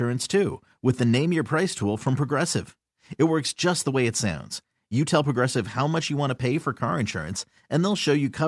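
No technical faults turn up anywhere in this speech recording.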